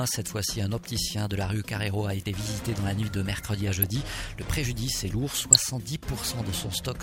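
Two brief patches of burbling break through the audio, from 3.82 to 3.90 s and from 5.52 to 5.62 s. This is DAB burbling. Under weak reception, a small fraction of bit errors slip past the error correction into the MP2 stream. Corrupted samples put short blips of noise in single sub-bands, and corrupted scale factors make sub-bands jump in level for up to a frame. The length of each patch points to a handful of consecutive frames being hit.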